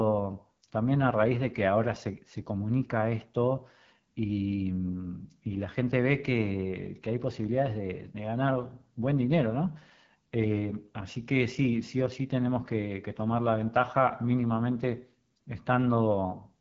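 Throughout, the speech is rough and raspy from AMR wideband (HD Voice) codec coding, which fits its 8.85 kbit/s mode; unlike narrowband telephone audio, sound reaches 7.4 kHz.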